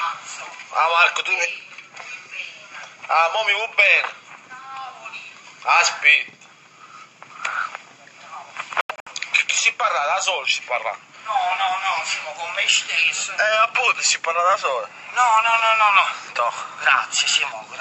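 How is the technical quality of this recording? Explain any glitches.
One glitch stands out. From 8.81 to 9.08 s the sound breaks up into several abrupt silences. Together they total about 171 ms. The longest gap lasts about 85 ms. This is likely a Bluetooth dropout. Packets reached the headphones too late and were discarded. Playback then resumes further along, as if it had kept running.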